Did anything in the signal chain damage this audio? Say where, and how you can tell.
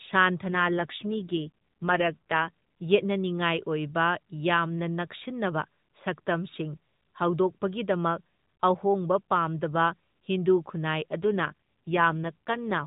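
Yes. An AMR rate drop at the network and codec stage runs from 0.46 to 2.50 s and again from 11.20 s to the end. In both spans the speech turns rougher and more synthetic while the band stays capped at 4 kHz and nothing drops out. That sound fits a weak radio link pushing the AMR-NB codec from 12.2 kbps down to 5.9 kbps, leaving fewer bits for the vocal-tract model and more for error protection.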